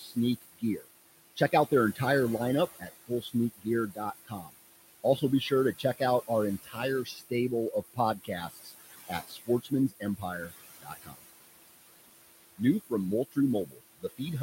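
A noise suppressor runs across the whole speech clip, pulling down the room noise, which sits about 12 dB under the talker, by about 19 dB in every band it judges to be steady noise. Because that decision is remade frame by frame, the background sinks in the pauses and surges back beneath the voice. These are classic noise suppressor artifacts.

The same processing repeatedly mistakes parts of the speech for noise, producing speech cut by the noise suppressor at 0.0 to 0.88 s, 1.36 to 2.0 s, 2.71 to 4.54 s, 5.17 to 6.29 s, 6.63 to 7.32 s, 7.71 to 11.22 s and 13.31 to 14.2 s. Soft consonants and word endings are dragged down with the background, by about 15 to 22 dB at worst. They sound swallowed or faint, most extensively in the long stretch from 7.71 s, where roughly a second and a half of speech is turned down.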